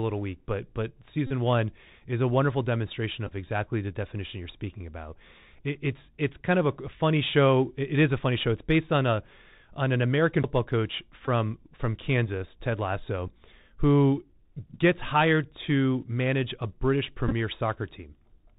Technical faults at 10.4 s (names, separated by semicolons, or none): Bluetooth CVSD headset codec; CD skip